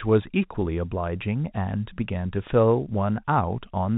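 No faults; the speech carries the expected G.711 telephone band-limit at 4 kHz, with the format's faint level-tracking quantisation noise well below the signal.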